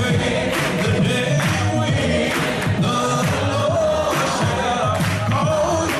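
Nothing in the audio here stands out as a technical fault, so there's nothing to flag at any point along the way.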